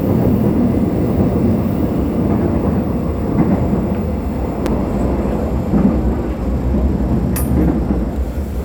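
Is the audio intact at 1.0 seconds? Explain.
Yes, at 1.0 seconds the sound is intact, with no dropout, click, distortion or other fault at that moment.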